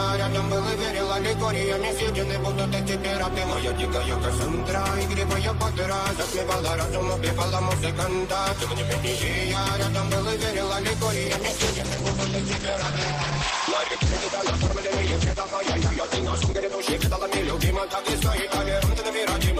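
At 11.27 s a call bitrate drop sets in. The encoder was forced to spend far fewer bits, which fits a fall from about 32 kbps to about 10 kbps. Coding turns coarse, and the top end is cut from 20 kHz to 8 kHz, so the sound dulls. This lowest state holds for about 5.5 s. Quality returns by 16.87 s.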